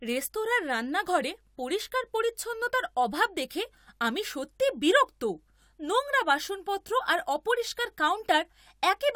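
Speech, no technical faults found anywhere in the recording.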